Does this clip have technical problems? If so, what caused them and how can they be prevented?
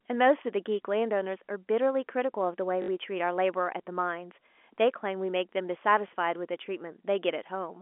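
Yes. The fault is packet loss with the last packet repeated. Audio packets failed to arrive, and the receiver filled each gap by replaying the final packet it had. This happened from 2.82 to 2.88 s, a 60 ms gap that fits three 20 ms packets, and from 6.08 to 6.10 s, a single 20 ms gap. Each replayed chunk rarely restarts in step with the speech's pitch cycle. The longer gap produces a brief buzzing stutter at about 50 Hz. The G.711 telephone coding carries the speech in the usual narrow phone band of 250 Hz to 3.4 kHz. To prevent the fault, reduce loss on the network path and use a jitter buffer with proper packet loss concealment instead of plain repetition.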